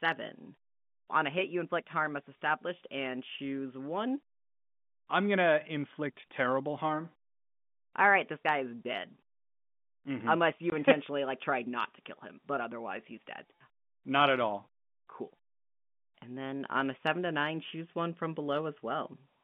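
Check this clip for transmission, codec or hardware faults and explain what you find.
One transmission fault is present in this speech. Packet loss filled with silence occurs from 10.70 to 10.72 s: a 20 ms piece of the stream never arrived, and the receiver inserted silence in its place. That produces a brief hole with abrupt edges, and the length suggests a single lost packet. The telephone-band sound, limited to roughly 150 Hz to 3.5 kHz, comes from the telephone line, which carries G.711 A-law coding.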